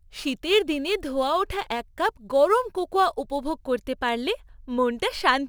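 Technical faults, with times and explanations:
0.00 to 3.67 s, crude rate conversion: a gritty, inharmonic fizz rides on the speech, rising with louder and brighter sounds, sitting roughly 30 dB below the speech. Samples were dropped or repeated to change the rate, with no anti-aliasing filter, and the error pattern fits a conversion from 48 kHz to 44.1 kHz. That periodic error creates tones unrelated to the speech, so the fizz follows the sibilants and loud syllables.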